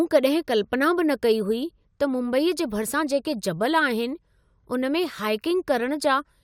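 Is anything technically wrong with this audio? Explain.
No, nothing technically wrong can be heard anywhere in this speech recording.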